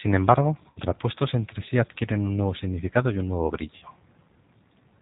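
Throughout the speech, the signal passes through a G.729 codec, which rebuilds the voice from a vocal-tract filter, a pitch predictor and a few pulses per frame, which fits an 8 kbit/s G.729A stream. The result is plainly audible: nothing above 4 kHz, and a rough, slightly synthetic edge on every syllable.

At 0.71 to 0.79 s and again at 3.76 to 3.85 s, there is VoIP packet loss concealed by the speech codec. About 60 ms of audio goes missing each time, which fits two lost packets. The decoder stretches its last pitch and filter into a fading buzzy tone or coloured noise, and the voice stays thin briefly after each gap.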